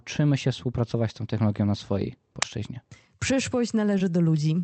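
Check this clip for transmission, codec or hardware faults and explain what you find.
Two faults stand out in this speech clip, which has passed through an Opus call path whose audio stops at about 8 kHz.

At 2.42 s there is an uninitialised buffer: a block was sent to playback before any audio had been written into it, so whatever values were left in memory were played as samples. It is heard as a very short, loud crack lasting about 5.8 ms, which fits a single 256-sample buffer played out unfilled.

From 3.98 to 4.00 s there is short concealed packet loss. About 10 ms of audio never reached the decoder in time, and the receiver filled the gap by extending the preceding sound, carrying its pitch forward if voiced or shaping noise if not, before blending back into the real signal. This is heard as a brief smear or wobble, and a short consonant at that point can be lost.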